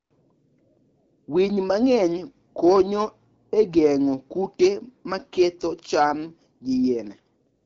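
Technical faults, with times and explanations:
Nothing stood out as a technical fault on listening to this speech.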